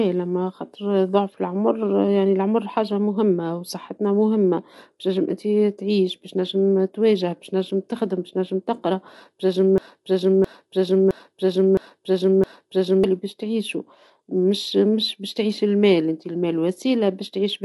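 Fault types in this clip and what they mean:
low-delay AAC compression: The speech is rough and grainy throughout, with noise filling the gaps between voice harmonics and nothing above 11.6 kHz. This likely points to AAC-ELD at around 32 kbps. Unlike a plain low-pass filter, it also roughens the band that remains.
broken-record loop: From 9.78 to 13.04 s a 0.66 s fragment repeats exactly, five times back to back, and the speech meant for that span is lost, likely a stalled player or stream resending its last fragment. Unlike a stutter or echo, every repeat is identical.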